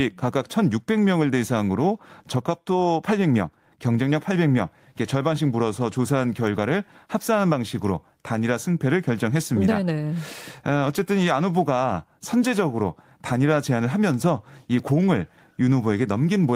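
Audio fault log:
No technical faults are present in this speech recording; the signal shows no problems at any point.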